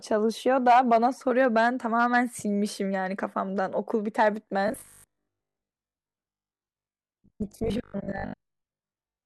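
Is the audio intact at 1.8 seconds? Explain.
Yes, the speech at 1.8 seconds plays through intact, with no audible fault at that moment.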